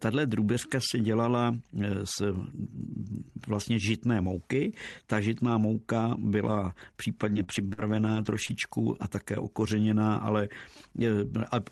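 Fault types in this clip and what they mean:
Repeated packet loss (robotic sound): from 7.21 to 8.51 s, between "žitná mouka byla" and "a také okořeněná ale", the speech turns choppy, with brief dropouts of up to 45 ms. Packets kept going missing, and each hole was patched by extending the preceding sound.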